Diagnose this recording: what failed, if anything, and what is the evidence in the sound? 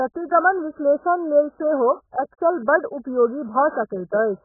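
Codec stage: throughout, the speech stops flat at 1.7 kHz, a hard spectrogram ceiling, likely from heavy AAC compression whose lowered cut-off fits roughly 8 kbps.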